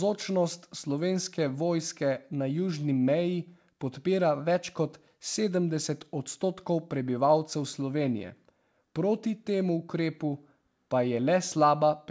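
No technical faults can be heard in this speech clip, which carries the ordinary band limit of a G.722 call path, with nothing above 8 kHz.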